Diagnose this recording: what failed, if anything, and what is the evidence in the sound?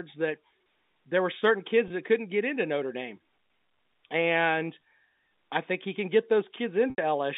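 Network stage, packet loss with pitch repetition on the G.711 call path. At 1.88–1.90 s, between "there were certain" and "that couldn't get into", a 20 ms gap, consistent with one lost packet, is bridged by a repeated pitch period that sounds slightly held and buzzy. At 6.90–6.98 s, an 80 ms loss fades to silence. On a spectrogram, identical harmonic stripes repeat, then decay to an empty gap.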